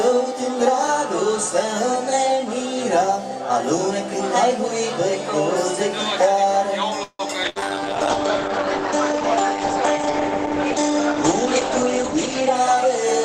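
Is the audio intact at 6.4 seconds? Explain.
Yes, the audio at 6.4 seconds is intact, with no dropout, click, distortion or other fault at that moment.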